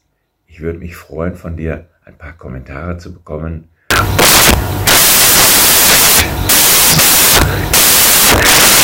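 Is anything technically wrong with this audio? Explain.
Yes. From 3.91 s to the end, the sound gives way to loud, harsh broadband noise. These are samples built from the wrong bytes: the reader assembles each sample with its bytes misplaced, whether shifted by one, swapped in order, or misaligned. The rapidly fluctuating low-order bits end up as the most significant part of every value, turning the signal into broadband hiss.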